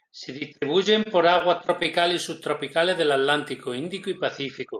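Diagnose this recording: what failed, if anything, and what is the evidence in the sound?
The speech shows repeated stalls (stutter) from the network stage, between 1.03 and 2.12 s, just before "y subtropicales del". Packets arrived late or slower than playback, so the jitter buffer ran dry nine times. Each time the receiver stretched the last sound, about 101 ms in all and none longer than 19 ms, so nothing is lost but the speech drags. A spectrogram would show brief smeared, repeated frames with vertical seams, and the waveform short duplicated cycles.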